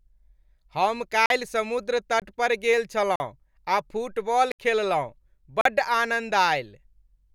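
Speech interrupted by five blocks of digital silence, at 1.26–1.30 s, 2.20–2.22 s (just before "पर गेल"), 3.16–3.20 s (just after "पर गेल"), 4.52–4.59 s and 5.61–5.65 s. Each is a hard cut to silence, lasting about 21, 43 or 70 ms, the shorter ones fitting 1024- and 2048-sample buffers not filled in time. On a waveform these show as flat lines, and on a spectrogram as empty vertical bands.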